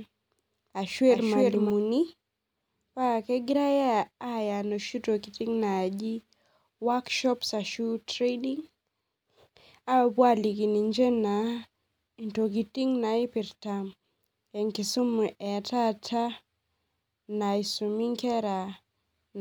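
A second copy of the signal was likely being mixed in from a slower capture path or an out-of-step edit, producing a doubled audio track from the very start of the speech until 1.7 s. The duplicate trails the original by roughly 0.3 s at around 5 dB quieter, so every syllable is followed by a dry, full-range repeat with no reverberant tail, and the repeat cuts off abruptly at 1.7 s.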